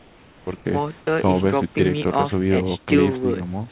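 A speech recording sent over a call path with discontinuous transmission, where the sender likely stopped transmitting during pauses its voice detector judged silent. From 0.00 to 0.47 s and again from 0.56 to 0.65 s, comfort noise stands in place of the background: the real room noise, sitting roughly 30 and 27 dB below the loudest speech, gives way to a steady, smoother noise shaped only roughly like it. The substitute is about 3 dB quieter in the first gap and about 9 dB quieter in the second, so the background thins and flattens before the room returns. At 1.05 s the onset is clipped by the voice detector, likely because it was slow to register that speech had resumed. The first 20 ms of sound were never sent and were filled with comfort noise, so the word begins abruptly, its soft attack missing, in a band that stops at 4 kHz, as the G.711 A-law codec does.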